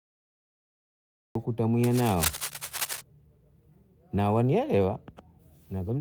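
A speech recording whose capture began late: a cut-off start leaves digital silence until 1.35 s, where the speech enters abruptly mid-sound with no natural attack. From 1.84 to 3.01 s, cable scratch noise, likely from a worn cable or connector being moved, adds dense, uneven scratching bursts only slightly quieter than the speech itself.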